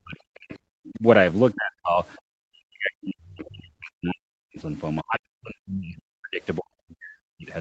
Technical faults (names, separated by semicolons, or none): speech suppressed in double talk